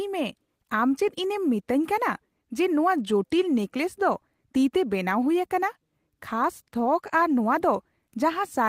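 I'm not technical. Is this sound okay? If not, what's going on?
Yes, no faults heard.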